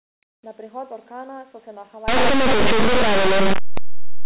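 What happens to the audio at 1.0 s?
Nothing goes wrong at 1.0 s: the speech carries on intact through that moment, with no break or fault.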